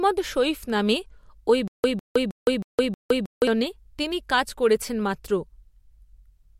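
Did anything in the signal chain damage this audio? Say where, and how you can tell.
Yes. There is a stutter with silent gaps from 1.68 to 3.47 s in this speech. The same 153 ms fragment repeats five times, each followed by about 164 ms of silence, giving an even 316 ms cycle. That regularity points to a stall at the playback or streaming stage, likely a player or stream that starved and, on each retry, replayed its last buffered fragment before running empty. The audio that belonged in that span is missing.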